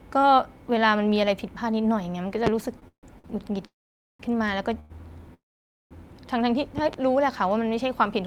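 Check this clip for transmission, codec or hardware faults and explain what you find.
The clip has three kinds of fault in speech: two loud pop events, a stretch of repeated stalls (stutter), and three call audio freezes.

Loud pop at 2.47–2.49 s: one sharp pop, roughly 20 dB above the speech. At 6.78–6.96 s there are two pops in quick succession at about 10 dB. Each is likely a voltage pulse from a switch, plug or static. The speech carries on underneath, so nothing is displaced, which separates them from the stalls.

Repeated stalls (stutter) from 2.79 to 3.42 s: packets arrived late four times, and the jitter buffer ran dry each time. The receiver stretched the last sound for 236 ms in total, about 38% of that span, with the longest wait 149 ms. The result is a dragging, hiccuping delivery with nothing lost, unlike a single freeze.

Call audio freeze at 3.66–4.21 s, 4.79–4.92 s and 5.34–5.93 s: each is likely a single long hold-up of packets in the network. 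The first and last fill 532 ms and 568 ms, most of it silence after a brief fading continuation. The middle one is a 105 ms fading continuation of the last sound with no silence. Speech then resumes where it stopped, later than before. It is one clean gap per event, not a chain of short ones.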